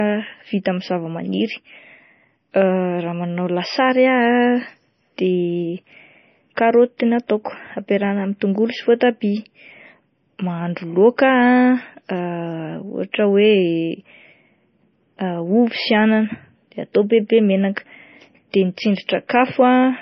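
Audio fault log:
throughout: low-bitrate audio saved at a high bitrate. The speech has nothing above 5.9 kHz. This is likely a very low-bitrate MP3 encode, around 24 kbit/s, later saved again at a much higher rate that cannot restore the top end the first pass removed.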